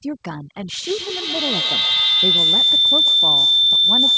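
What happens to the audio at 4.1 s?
A piercing whine around 4 kHz, peaking about 8 dB above the speech with a loop delay of roughly 150 ms, is a feedback howl. It runs from 0.82 s to 4.17 s as a mic-to-speaker loop gains level on each pass. The background drops and twinkles, a sign of overdone noise removal throughout: bands near the noise estimate are cut, taking quiet speech detail with them.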